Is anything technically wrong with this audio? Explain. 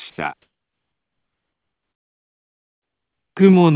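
Yes, two things. From 0.10 to 0.18 s the background, which sits about 63 dB below the loud parts, turns into steady, featureless hiss about 4 dB louder. That's likely comfort noise in place of the background, generated while transmission paused. Then from 1.86 to 2.75 s the level collapses by about 19 dB, leaving a faint residue, likely one channel inverted, so the shared content cancels in mono. Throughout, the call path's band limit means nothing above 4 kHz.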